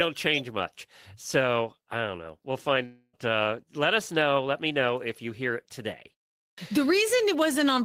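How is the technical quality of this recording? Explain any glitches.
There are two glitches in this speech recording, one midway and one near the end.

From 2.85 to 3.15 s there's what sounds like a long network dropout. The likely cause is about 280 ms of audio that never arrived, so the receiver had nothing real to play. It carried the last sound forward as a fading buzz for most of that gap, then left a short stretch of silence, about 30 ms. When the audio resumes, the lost part is simply gone, leaving a hole in the speech.

Around 6.47 to 6.58 s you get a clipped start after a pause. After roughly 0.4 s of quiet, the output device seems to have gone idle, and it needed time to wake up again. By then about 109 ms of the next phrase had already passed, so the speech jumps in abruptly out of silence without its opening sounds.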